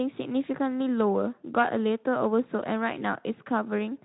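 No faults detected in this speech clip: the Speex path behaves as expected at about 15 kbps, with light codec colouring and no content above about 3.9 kHz.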